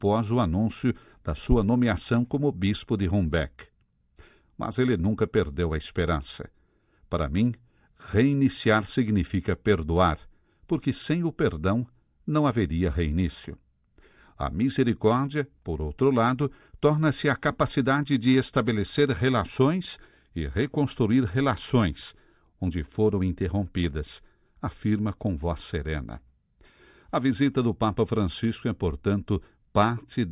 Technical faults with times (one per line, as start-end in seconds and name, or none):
none